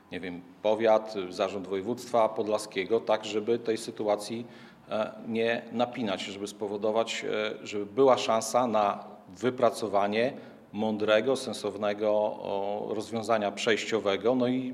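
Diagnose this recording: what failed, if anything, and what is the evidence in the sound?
No fault detected anywhere.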